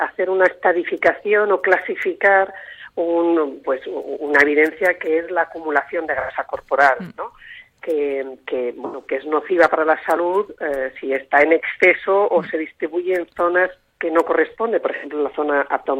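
AAC frame loss with concealment occurs three times, at 6.20 to 6.31 s, 8.85 to 9.06 s and 14.94 to 15.06 s. Each time the decoder lost about 85 ms of coded audio, which fits two consecutive frames, and papered over the gap by reusing the last good spectrum with its phase information scrambled. Because each gap is short, the sound doesn't drop out. It turns briefly smeared and noisy, with a hollow, phasey quality, before clean decoding resumes.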